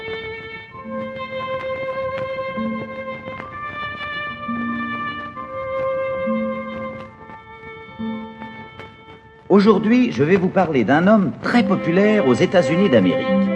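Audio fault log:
Nothing stood out as a fault on listening to this clip.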